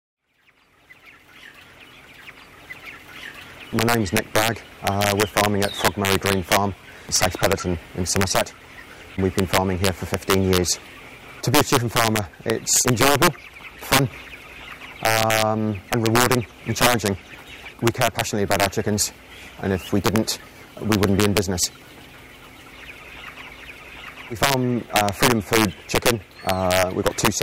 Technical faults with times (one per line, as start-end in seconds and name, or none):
0.00-27.42 integer overflow